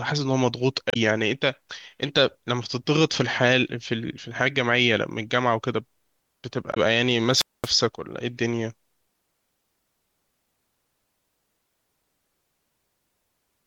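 Damaged data in the compressed stream hits this speech recording twice, at 0.90–0.97 s and 6.71–6.77 s: corrupted bytes make the decoder misread frames and lose sync, so each spot comes out as a short glitch while it finds the next frame header. A wireless microphone squelch dropout follows at 7.32–7.72 s. The radio link fades, hiss swells, and the receiver's squelch mutes the output for about 0.22 s before the voice returns.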